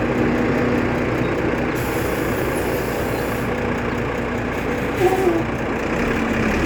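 No faults found anywhere in the audio; nothing goes wrong at any point in the recording.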